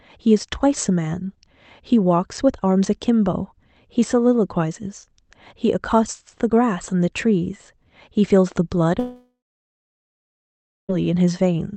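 At 8.99 s the speech breaks off. A buzzy continuation of the last sound fades into about 1.5 s of silence, and speech resumes at 10.91 s with roughly 1.9 s missing. This is likely a long network dropout. The fading tail, not a hard cut, sets it apart from a plain mute.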